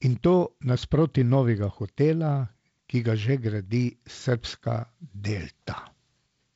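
Nothing goes wrong anywhere in this speech; it simply comes through G.722 wideband telephone coding at 48 kbit/s, so the sound tops out around 7.7 kHz and carries the faint, light hiss that coder leaves behind.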